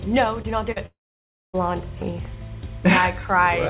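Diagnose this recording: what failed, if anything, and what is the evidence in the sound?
A faint, steady chirping warble sits behind the sound for the whole clip, flipping between pitches near 1 kHz and 2 kHz, roughly 35 dB below the programme. This is timecode bleed in the analogue wiring: 25-frame linear timecode leaking from a neighbouring track or cable.

Two brief smears are heard, at 0.42 to 0.46 s and at 0.72 to 0.78 s, each a short wobble where the sound briefly holds and then rejoins. This is short concealed packet loss on the network: about 20 ms and 40 ms never arrived, and the receiver extended the preceding sound to cover each hole.

From 0.86 s the sound stretches into a fading buzz or hiss and then drops to about 0.6 s of near-silence before resuming at 1.55 s, with that stretch simply gone. This is most likely a long network dropout, with concealment fading out on the G.711 call path, which is band-limited to 4 kHz.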